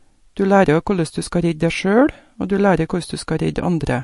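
MP3 compression artefacts run through the whole speech recording, with nothing above 11.3 kHz and a watery, swirling texture from a likely starved encoder, which fits roughly 48 kbps.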